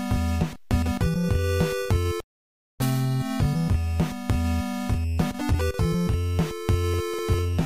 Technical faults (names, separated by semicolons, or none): none